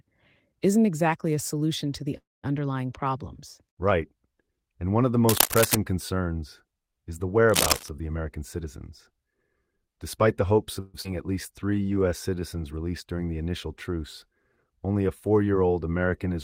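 It's a speech recording with a run of network and contact problems. At 2.17 s there's a call audio freeze lasting about 0.26 s: the last sound trails off and then goes quiet for roughly 0.19 s before the speech resumes where it stopped, likely because delayed packets drained the jitter buffer. A shorter freeze at 10.80 to 10.96 s fills about 0.14 s with a fading continuation and has no silent stretch. Cable scratch noise shows up at 5.28 to 5.75 s, about 5 dB above the speech, and again at 7.50 to 7.89 s at about the same level as the speech. Both bursts are dense, uneven rustling, likely from a worn cable or connector being moved. From 8.15 to 10.80 s a jitter buffer speed-up runs the speech at 108% with the pitch unchanged, trimming around 0.2 s in total, so that stretch sounds hurried. At 11.02 s a skip ahead jumps forward past roughly 0.15 s of audio, and the two sides are joined with only a tiny 27 ms fill. 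Right after that, 11.53 to 12.41 s has a jitter buffer slow-down at 88% speed, adding 117 ms by repeating pitch periods, which drags the speech out at the same pitch as the buffer rebuilds its reserve.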